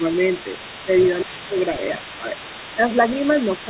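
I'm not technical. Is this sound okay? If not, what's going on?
No. Two things are going on. First, speech suppressed in double talk: the speaker's voice briefly dips at 0.00 to 0.06 s, more noticeably at 1.24 to 1.56 s, and again at 1.74 to 2.01 s and 2.21 to 2.35 s. This likely happens because both people talked at once, and the call's echo canceller, which tries to keep the listener's own voice from bouncing back, couldn't tell the two apart and turned everything down for a moment.

Second, the other side's voice is leaking through for the whole clip, from start to finish. A quieter second voice sits underneath the main speaker. The speaker's device plays the other person through its loudspeaker, and the microphone picks that up again. The echo canceller likely failed to scrub all of it out, so it comes back to you. The call line also limits the sound to an ordinary telephone quality, with nothing above about 4 kHz, which makes it sound a little narrow.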